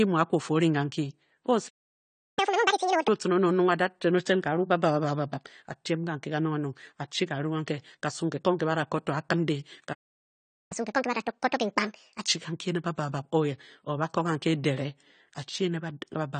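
Throughout the speech, nothing survives above 9 kHz, and the damage from AAC compression is plainly audible. Sibilants turn fizzy and sustained vowels warble. The likely cause is AAC-LC at a low bitrate, which fits something around 32 kbps. A plain low-pass filter would only dull the top. Here the remaining bands also sound dull and smeared, because the encoder starved them of bits.

From 1.68 to 2.39 s the audio simply stops for about 0.69 s. This is a playback stall, and the sound then carries on. A packet-loss gap is short and choppy. This is a single long, clean silence in mid-flow, of the kind a player starved of data likely produces.

Straight after, from 2.39 to 3.08 s, there is catch-up at higher speed. The backlog plays at 2.0 times normal rate, so pitch jumps by roughly ten semitones over "otcin oned" until it settles. A pure pitch shift would not do this, because here the timing is compressed along with the pitch.

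A second stall silences the audio from 9.92 to 10.72 s, for about 0.78 s. A gentler catch-up follows from 10.72 to 12.28 s at 1.5 times speed, raised about seven semitones over "kanki ene bab", returning to normal by 12.28 s.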